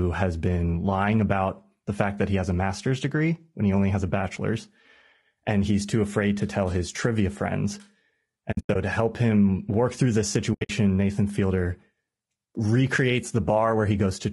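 The audio is speech, and a low bitrate low-delay AAC encoder, likely AAC-ELD at around 32 kbps, is the most probable source of the damage heard throughout. Its short frames cannot separate the pitch harmonics cleanly at this rate, so the voice comes out rough and grainy, with noise filling the gaps between harmonics and a top band that sounds thin and synthetic. That codec damage is plainly audible across the whole clip. On top of that, there are two bursts of AAC frame loss with muting, where the decoder zeroed the missing frames. The first, from 8.51 to 8.76 s, sounds like scattered dropouts adding up to about 180 ms of lost audio, with the longest single gap around a tenth of a second. The second, from 10.53 to 10.70 s, loses about 140 ms in the same broken-up way, its longest gap somewhat shorter. Because the overlapping windows fade the sound down and back up, each gap is a soft-edged hole in the voice.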